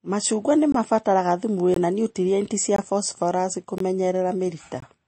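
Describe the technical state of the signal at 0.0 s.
Right at 0.0 s you're already hearing MP3 compression damage, and it runs the whole clip. Nothing gets through above about 8.4 kHz, so the speech sounds dull, and there's a watery, swirly quality where weak frequency lines flicker on and off between frames, likely from a starved, roughly 32 kbps encode.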